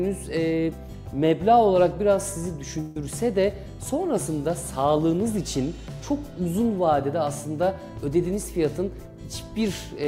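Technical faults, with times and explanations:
2.80–2.97 s, long network dropout: a buzzy smear replaces about 150 ms of sound before the audio resumes further on, likely from packets lost in transit.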